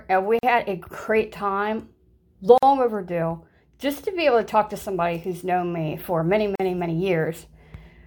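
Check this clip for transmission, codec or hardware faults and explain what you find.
The speech has one kind of fault, occurring three times: a gap at a join of encoded pieces.

Short holes of silence, roughly 41 to 47 ms with softened edges, open at 0.39–0.43 s (between "and we" and "had a great time"), 2.58–2.63 s, and 6.56–6.60 s (after "known me for many"). The speech then resumes where it stopped. Separately encoded segments were joined untrimmed, leaving each encoder's start-up delay and final-frame padding in place.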